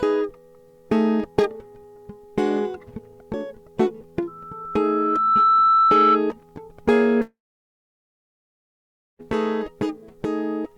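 At 4.27 s a loudspeaker feedback squeal starts in the music. A single tone near 1.3 kHz swells over about a second. It settles roughly 5 dB above the music. The microphone is hearing its own loudspeaker. The loop gain exceeds one at that frequency. It stops at 6.21 s.

From 7.21 s to 9.25 s the music breaks off. A brief fading buzz continues the last sound. Then nearly 2 s of silence follows. The music resumes further on, and the missing passage never plays. This is likely a long network dropout.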